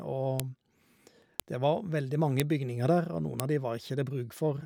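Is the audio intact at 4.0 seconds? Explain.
Yes, the speech at 4.0 seconds comes through intact, with no technical fault at that moment.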